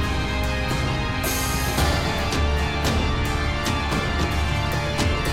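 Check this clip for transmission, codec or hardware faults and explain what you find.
No faults turn up anywhere in this clip. Nothing in the audio points to a problem along the recording or delivery chain.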